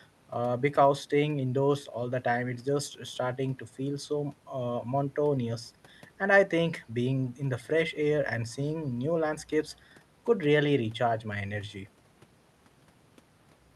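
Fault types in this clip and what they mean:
There are no fault types in this speech clip, only the ordinary coding of the call path it passed through.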